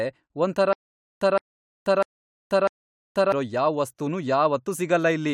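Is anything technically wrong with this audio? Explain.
Yes. From 0.73 s to 3.32 s the speech shows a stutter with silent gaps: a fragment about 164 ms long plays four times, each followed by roughly 484 ms of digital silence, so the burst returns on an even 648 ms cycle. The likely cause is a stalled player or stream that replays its last buffered fragment at each retry and then runs dry. Whatever speech belonged in that stretch is missing rather than delayed.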